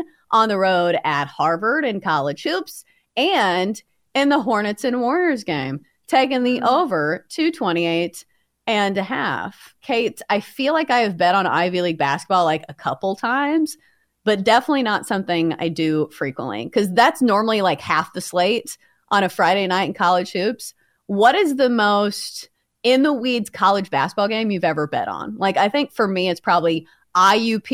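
Nothing goes wrong at any point in this stretch of speech, so there's no technical fault to walk through here.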